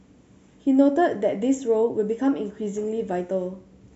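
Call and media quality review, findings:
No findings from the call and media quality review.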